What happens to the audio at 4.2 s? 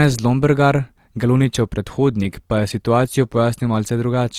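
At 4.2 s the speech sounds grainy and rough, with a noisy, fizzy texture in place of clean tones. This runs through the whole clip and is likely Opus compression in its music mode, where starved bands get filled with folded or noise energy, which fits a low bitrate of about 24 kbps.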